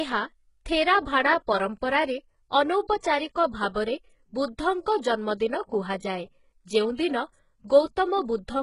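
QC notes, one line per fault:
throughout HE-AAC compression: heavy codec damage, with nothing above 11.1 kHz and a treble that sounds synthetic, gritty and lispy on sibilants, because the top band is rebuilt from copied lower bands rather than coded. This likely points to HE-AAC at a very low bitrate, around 12 kbps.
3.00 to 3.03 s pre-echo: a brief hiss of about 32 ms leads into a sharp attack, softening its onset. The transform block spreads quantisation noise sized for the loud onset back across the quiet moment before it.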